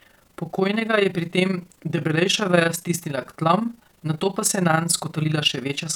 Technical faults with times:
0.00-5.95 overlap-add ripple

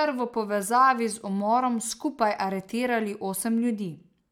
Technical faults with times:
none

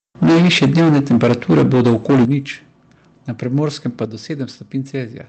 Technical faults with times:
0.22-2.34 microphone overload
0.23 microphone volume stepped down
2.25 microphone volume stepped down
4.05 microphone volume stepped down

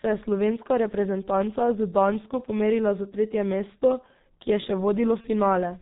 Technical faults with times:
0.00-5.81 G.723.1 codec
5.21-5.25 VoIP packet loss concealed by the speech codec

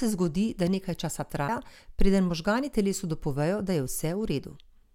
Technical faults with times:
1.48 CD skip

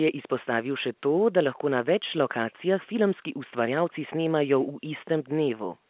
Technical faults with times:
none

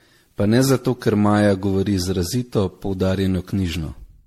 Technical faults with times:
0.00-4.27 generation loss

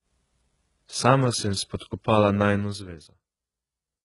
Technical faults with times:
0.00-4.05 HE-AAC compression

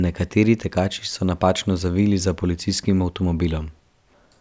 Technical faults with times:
none

